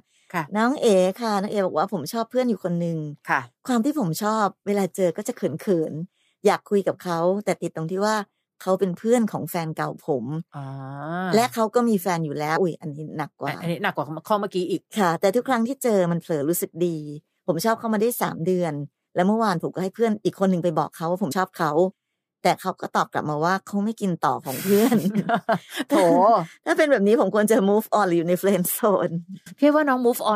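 At 12.55 s and 21.31 s the speech jumps ahead about two 26.1 ms frames, and at 29.46 s it jumps about seven, with compressed frames skipped each time.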